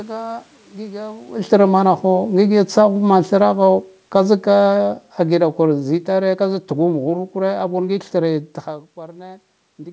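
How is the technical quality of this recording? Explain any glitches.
The speech has one clear technical fault, a gain drop handled by automatic gain control. The content ends around 8 kHz, which fits a G.722 wideband call path, and the level changes near 1 s and 8.5 s sound like the talker shifting position.

From 3.16 s to 8.46 s, the speech and the room noise behind it sink together, by about 9 dB in total, with no sudden step. This is automatic gain falling: the call's gain control judged the input too loud or its background noise too strong and eased its gain down over several seconds, so everything through the microphone, background included, fades in level at once.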